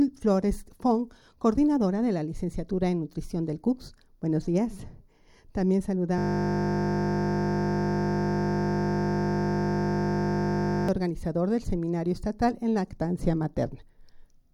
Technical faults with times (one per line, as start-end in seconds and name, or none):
6.18-10.89 system hang loop